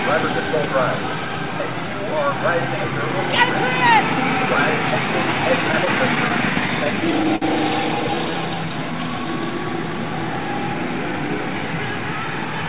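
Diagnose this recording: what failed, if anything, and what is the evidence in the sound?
Network and jitter buffer stage. Repeated stalls (stutter) run from 5.72 to 7.45 s. There are about a dozen brief holds, the longest 56 ms. Packets arrived late, the buffer ran dry, and the receiver stretched the last sound each time. Nothing is lost, but the audio drags.

Jitter buffer stage again. A jitter buffer slow-down follows from 7.98 to 8.93 s. Playback runs at 92% speed, adding 89 ms. The receiver repeated single pitch periods to rebuild its reserve, so sounds are drawn out at unchanged pitch. The whole clip is band-limited at 4 kHz, as the G.711 call codec does.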